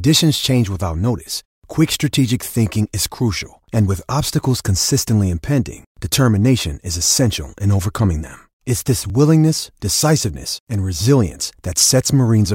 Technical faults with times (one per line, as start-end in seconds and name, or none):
9.10 audio missing between chunks